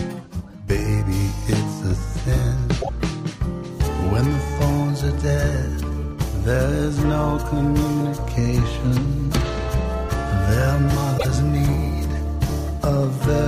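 A broken MP3 bit reservoir likely causes the two glitches at 2.81–2.89 s and 11.17–11.25 s. Each time, the audio jumps ahead and about three 26.1 ms frames come out garbled, because the frames after a cut reach back into reservoir bytes that now belong to a different frame.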